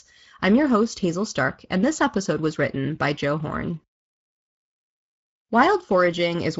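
From start to end the speech carries Speex codec damage, plainly audible as a hoarse, noisy edge, which fits a mid-rate setting near 17 kbps. The CELP coder lacks bits for the excitation. On a spectrogram, harmonics look smeared and any band above 8 kHz shows only diffuse, noise-like fill.

At 5.45 to 5.49 s, a 40 ms gap, consistent with two lost 20 ms frames, is filled by VoIP packet loss concealment from the speech codec. The decoder repeats its last pitch and filter at falling gain, giving a brief stretched sound that fades. The waveform shows a shrinking stretch, and the spectrogram shows a frozen, fading spectrum.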